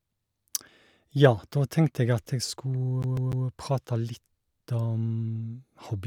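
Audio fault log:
3.03 to 3.47 s, CD stuck on one turn: a scratch keeps knocking the laser back one track at the same point of each rotation, so a 0.15 s slice of the speech plays three times over, each jump marked by a brief mute, giving a fast, even stutter.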